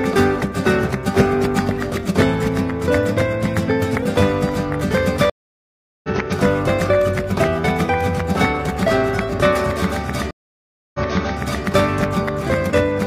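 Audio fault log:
5.30–6.09 s, stream reconnect: the connection dropped and the player rebuilt its decoder mid-stream. The sound cuts to 738 ms of silence, then resumes about half a second further on, skipping material as a live feed would, and fades in over the first frame or two.
10.31–11.64 s, stream reconnect: the same break, with 632 ms of silence, but the server resent a burst, so the sound resumes 697 ms earlier and briefly repeats itself.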